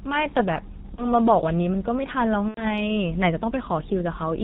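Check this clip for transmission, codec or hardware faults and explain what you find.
Yes, there are two problems: heavy codec damage across the whole clip, and two short dropouts patched over by the decoder.

G.723.1 codec, throughout: this low-rate telephony coder, here sounding like its 6.3 kbit/s mode, cuts everything above 4 kHz and tracks the voice model only in coarse 30 ms steps. The speech comes out muffled and hoarse, with smeared consonants.

VoIP packet loss concealed by the speech codec, at 0.95–1.06 s and 2.48–2.72 s: packets went missing, so the decoder kept reusing its last pitch and filter while lowering the gain. The first gap fits one lost 30 ms frame, the second about three frames (90 ms). Each stretches into a buzzy tone or coloured noise that fades, and the voice stays weak and distorted for a bit after the packets come back.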